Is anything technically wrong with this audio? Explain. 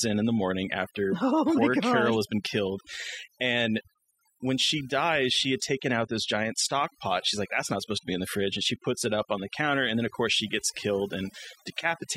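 Yes. Across the whole clip there's overdone noise removal. A noise reduction stage was pushed too hard on a noisy recording, so it drives individual frequency bands way down or shuts them off whenever they sit close to its noise estimate, and the quieter parts of the speech get caught along with the noise. You hear the background drop away and break into twinkling, warbling specks.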